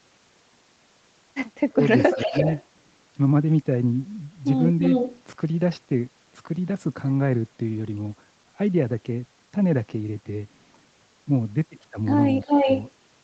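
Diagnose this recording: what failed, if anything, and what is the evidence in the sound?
There is an echo leak in the call processing. A delayed copy of the speech, about 340 to 350 ms late, comes back at 1.71–1.82 s (faint, about 30 dB down), 1.99–2.64 s, 4.83–5.23 s and 12.41–12.83 s, where it is nearly as loud as the speech. The likely cause is a loudspeaker-side echo canceller letting its mic pickup through.

There is also speech suppressed in double talk, from the same canceller. The speech dips by roughly 20 dB at 1.71–1.80 s, and by about 10 dB at 2.15–2.47 s and 12.45–12.68 s, each time while echo overlaps it. It likely couldn't tell the local talker from the echo and turned both down.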